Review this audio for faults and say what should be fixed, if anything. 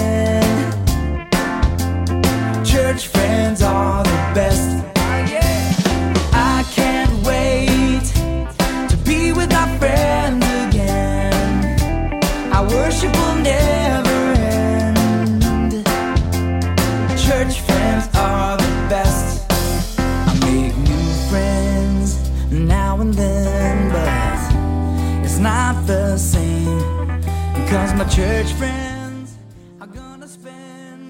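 No faults found; nothing needs fixing here.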